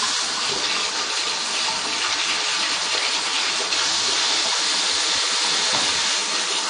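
A low-bitrate encoding stage, likely AAC compression with AAC-LC at a rate consistent with about 32 kbps, runs through the whole recording. With so few bits per frame, the encoder discards everything above 9.5 kHz and quantises the remaining spectrum coarsely. The sound is noticeably dull and lacks air at the top. The coding damage is plainly audible as a smeared, warbling texture, with a fizzy edge on sustained and noisy parts.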